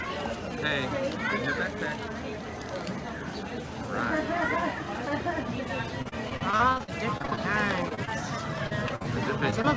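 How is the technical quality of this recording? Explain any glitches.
The recording has clear packet-loss damage in its last four seconds. The audio stops at 8 kHz, which fits a wideband call codec such as G.722 at 64 kbps.

Repeated packet loss (robotic sound) runs from 6.02 to 7.39 s and again from 8.67 to 9.06 s. The first stretch has fifteen gaps, the longest about 41 ms. The second has four gaps, the longest about 48 ms. Roughly a quarter of each stretch is patched by the receiver stretching the last received sound into each hole, with the next hole following soon after. The result is choppy, with pieces missing.

Short concealed packet loss occurs as isolated single holes of about 20 ms each: 7.89–7.93 s, 7.95–7.99 s, 8.05–8.09 s, 9.50–9.54 s and 9.62–9.66 s. Each hole is filled by continuing the preceding pitch or noise, then blended back into the real signal. Each one is heard as a brief smear or wobble, and a short sound can drop out. 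What separates these from the robotic stretches is that each is a single hole, with no run of back-to-back patches.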